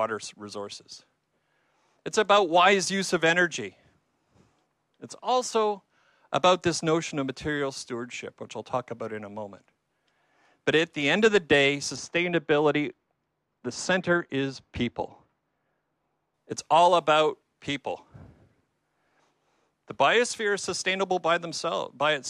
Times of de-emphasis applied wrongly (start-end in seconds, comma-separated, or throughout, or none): 11.96-16.34